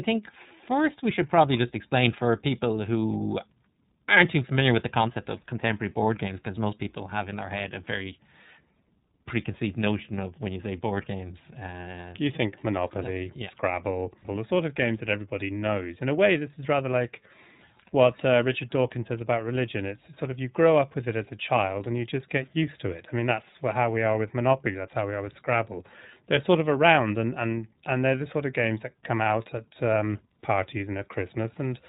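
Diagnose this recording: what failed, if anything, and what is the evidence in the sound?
The codec stage is the culprit here: this speech has been through iLBC, and the damage is plainly audible. Nothing comes through above 4 kHz, and the voice has that slightly rough, synthetic edge, consistent with the 13.33 kbps, 30 ms frame mode.

On the network side, there's one lost iLBC frame from 24.72 to 24.75 s. The decoder filled the gap by repeating the last pitch cycle with some noise, so you hear a brief buzzy held vowel, which fits a single 30 ms frame. Because iLBC frames stand alone, the voice snaps back right after.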